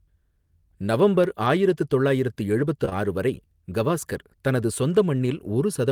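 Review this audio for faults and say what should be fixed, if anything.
CD scratch ticks: five very brief ticks, the longest about 1.5 ms, from 1.24 to 1.90 s, just before "தொள்ளாயிரத்து எழுபத்து ஆறு வரை". A scratch defeats the disc's error correction once per revolution, so the player interpolates or mutes a few samples. Their steady rotation-rate spacing sets them apart from random clicks. Re-rip from a clean disc with a secure, multi-pass ripper.

Short concealed packet loss: two back-to-back 20 ms gaps at 2.85 to 2.93 s, between "தொள்ளாயிரத்து எழுபத்து" and "ஆறு வரை கவாஸ்கர் தனது". The decoder filled them by extending the preceding sound, leaving a single smeared wobble rather than repeated ticks. A larger jitter buffer or forward error correction on the link would prevent it.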